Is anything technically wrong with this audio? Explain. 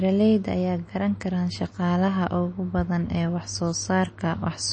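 Yes. MP3 compression damage runs throughout the speech, and it is plainly audible. Nothing is present above about 8.4 kHz, which points to a likely low-bitrate MP3 encode, around 32 kbps. Starved of bits, the encoder discards the treble above a fixed cutoff and drops quieter frequency components, which flicker in and out from frame to frame. The result is a dull, band-limited tone with a watery, swirling texture, metallic chirps on s sounds, and smeared consonant attacks.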